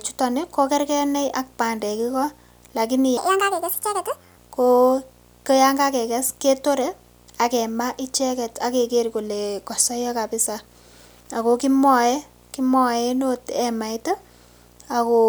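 A steady 60 Hz buzz with hash above it sits about 30 dB below the speech throughout: video or display buzz from a screen or video cable coupling into the audio. From 3.17 to 4.37 s the speech turns high and hurried, about seven semitones up at 1.48 times speed, a section at the wrong speed, likely from playback fitted to the wrong clock.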